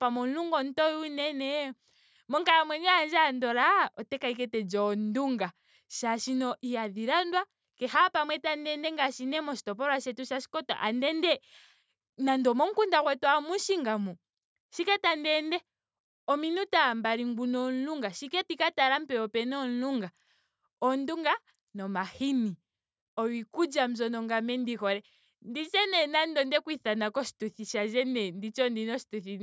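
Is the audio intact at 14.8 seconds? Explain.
Yes, the speech at 14.8 seconds is intact, with no dropout, click, distortion or other fault at that moment.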